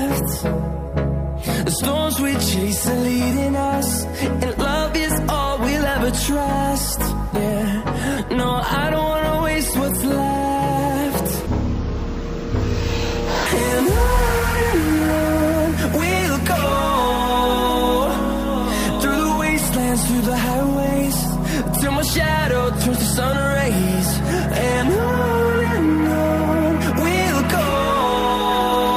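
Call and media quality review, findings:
Stereo read as mono, 11.46 to 13.46 s: half speed, pitch down 12 semitones. Interleaved left/right samples consumed sequentially as one channel, likely a channel-count mismatch in the decoder or playback path.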